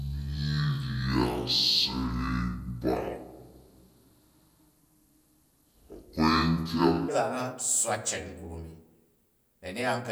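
A playback clock mismatch likely ran the opening of this speech clip as a section at the wrong speed, from 0.00 to 7.08 s, at 0.552 times normal speed. Pitch falls with it by around ten semitones, so the voice sounds deep, dragged and slowed until normal speed returns.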